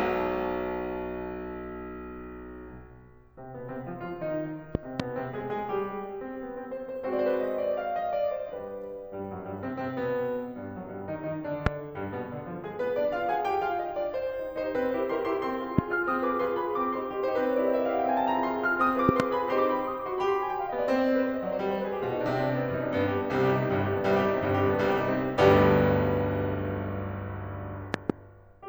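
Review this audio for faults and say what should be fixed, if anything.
A voltage spike, likely from a switch, connector or static discharge, is entering the signal path, producing loud pops about 20 dB above the music, which continues underneath. Double pops occur at 4.75–5.02 s, 19.09–19.22 s and 27.94–28.12 s, and single pops at 11.66–11.69 s and 15.78–15.81 s. Secure connectors, mute outputs before switching, and ground equipment properly to stop these transients.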